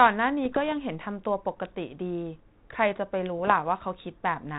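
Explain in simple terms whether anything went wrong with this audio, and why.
Bit errors on an ADPCM link cause rough pops and brief level jumps at 0.44–0.73 s and 3.39–3.52 s. Each corrupted bit briefly derails the decoder, so the damage rings on instead of clicking once.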